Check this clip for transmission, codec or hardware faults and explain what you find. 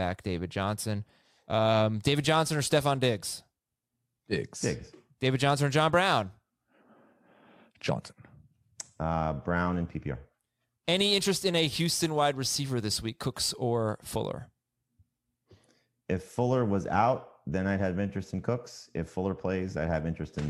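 No faults turn up anywhere in this clip.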